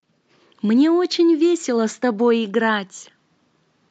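No technical faults can be heard in this speech.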